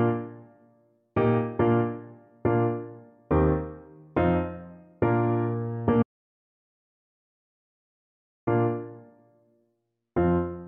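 At 6.03 s the input likely dropped out, leaving silence written until 8.47 s: an audio dropout to silence, about 2.44 s of dead, tone-free gap.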